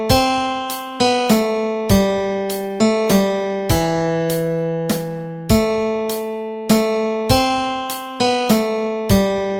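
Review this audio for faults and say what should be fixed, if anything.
Nothing here needs fixing, as no faults turned up anywhere in the recording.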